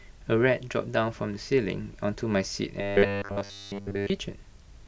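From 2.81 s to 4.10 s the speech collapses into robotic sound from repeated short buffers: a rigid, metallic buzz at 100 Hz that only loosely tracks the words. The likely cause is audio arriving too slowly, so the playback path keeps looping a 10 ms block instead of advancing. Essentially all of that stretch is repetition, with the real audio skipped, and the 10 ms loop period is what pins the buzz at 100 Hz.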